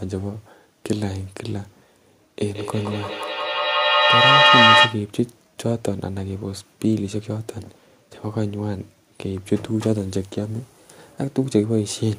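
Feedback echo between two devices runs from 2.43 to 5.11 s in this speech clip. A second device in the room replays the audio into the microphone, so each word returns about every 150 ms, and the loop is loud enough that repeats build to about 8 dB above the speech.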